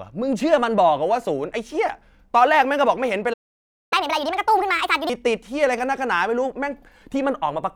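At 3.33 s the speech cuts to silence and stays silent until 3.93 s, a gap of about 0.58 s. That is a playback stall, most likely the player running out of buffered data or its thread being held up. When sound returns the speech carries on, and the silence is clean and complete rather than a crackle or a brief tick.

From 3.93 s to 5.10 s the player works through its backlog as a catch-up at higher speed, running at 1.5 times normal rate by resampling. Because tempo and pitch climb together, the speech sounds hurried and chipmunk-like, raised by roughly seven semitones. This sets it apart from a pitch-shift fault, where timing would stay normal. At 5.10 s speed and pitch drop back to their normal values.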